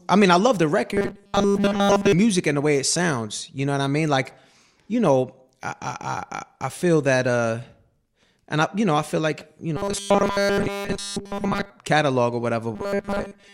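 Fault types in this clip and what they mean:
Robotic sound from repeated short buffers: Three stretches take on a rigid, metallic buzz locked at 200 Hz. They run from 0.93 to 2.12 s (between "mean I love the" and "music and the way"), from 9.77 to 11.70 s, and from 12.75 s to the end. The pitch fits a 5 ms slice being replayed, likely because new audio arrived too seldom. Unlike a corrupt frame, it is sustained and holds a steady pitch. The middle stretch is almost entirely repeats.
Corrupt frame decoded: Damaged compressed data was played anyway, throwing energy to wrong frequencies in two brief bursts. From 4.25 to 4.34 s, after "know what I mean" and before "you know I", a faint error spans several consecutive frames. From 9.39 to 9.42 s, after "you know I feel", a shorter but louder error appears. These are momentary errors, not a sustained buzz tied to a fixed repeat rate.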